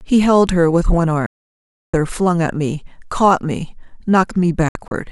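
Two digital broadcast dropouts show up in this speech. At 1.26 s the receiver loses good frames and mutes until 1.94 s, so about 0.67 s of programme simply vanishes, which fits roughly 21 frames of 32 ms each. Then from 4.69 to 4.92 s it breaks up into short holes scattered across about 224 ms, losing 96 ms in all, with the longest gap 64 ms. That second one sounds choppy rather than cleanly cut.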